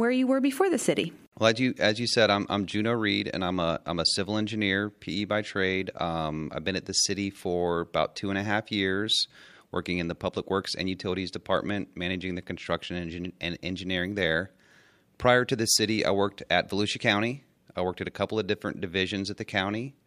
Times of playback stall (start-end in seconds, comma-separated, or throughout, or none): none